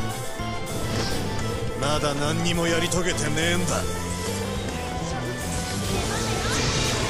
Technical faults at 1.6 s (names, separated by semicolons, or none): none